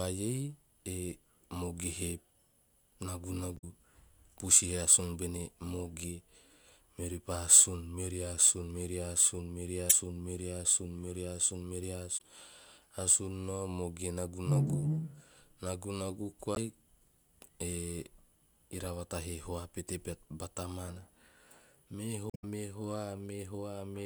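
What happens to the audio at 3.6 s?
Damaged data in a compressed stream runs from 3.54 to 3.64 s, about a tenth of a second. Part of the compressed speech there is corrupt. The decoder cannot read those frames properly. It loses sync and hunts for the next valid frame header before playback recovers. The result is a brief chirp, squawk or blip cutting into the speech at that point, rather than clean audio.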